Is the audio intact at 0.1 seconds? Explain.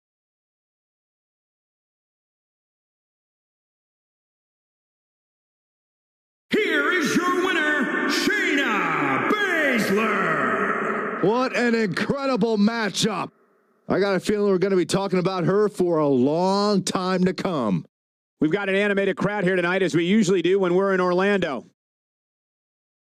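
No. At 0.1 s the audio is already affected by gain pumping, which runs through the whole clip. The level swings by around 10 dB, so loud and quiet passages sit unnaturally close together and the sound is squashed. The likely cause is input gain set far too high, with a fast limiter or compressor clamping down on every peak.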